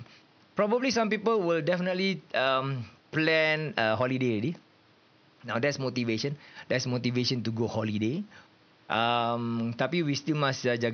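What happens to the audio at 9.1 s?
At 9.1 s the speech plays through intact, with only the room's own background noise sitting about 33 dB below it.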